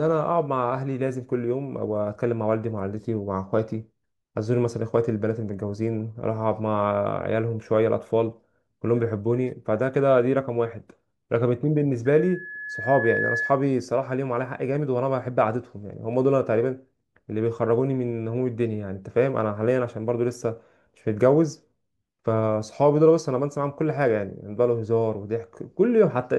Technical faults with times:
12.05-13.60 loudspeaker feedback squeal

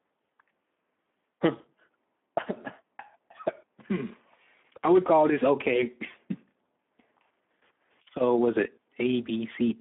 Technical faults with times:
0.00-9.81 Speex codec
1.57-1.63 VoIP packet loss concealed by the speech codec

